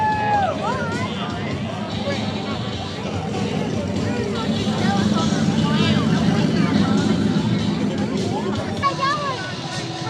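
Throughout the clip, the sample rate has been converted by crude rate conversion, estimating new samples by straight-line interpolation between neighbours with no anti-aliasing filter. The modest mismatch points to a 44.1 kHz to 48 kHz change. The resulting error sits roughly 45 dB below the signal and forms shifted, inharmonic copies of the audio, heard as a faint gritty, inharmonic fizz riding on louder and brighter passages.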